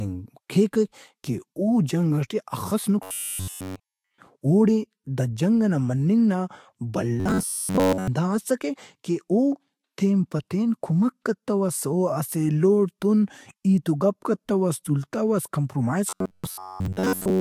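Robotic sound from repeated short buffers at 3.03–4.18 s after "جنگ ئٹے ہخس", 7.20–8.08 s before "اسکہ کہ", and 16.10–17.41 s after "کتوس تُولتوس کمپرومائز". The speech turns into a rigid metallic buzz at 93.8 Hz. The cause is likely a roughly 10.7 ms chunk being replayed while fresh audio was skipped. The buzz fills the first stretch completely and most of the other two.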